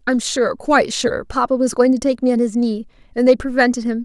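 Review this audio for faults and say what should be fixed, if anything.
Nothing stood out on listening to this speech recording, so there is nothing here that needs fixing.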